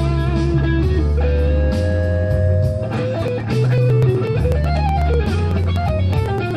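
From 3.16 s to 6.51 s, regular ticks run through the audio. This is periodic USB or driver dropouts. Something keeps stalling the USB link or the audio driver on a fixed cycle. Each stall loses about a millisecond of sound. That piece is skipped, not filled with silence, so the waveform jumps. The jumps come every 0.124 s, about eight per second. Around thirty fall in this stretch. They click evenly, and only where there is signal.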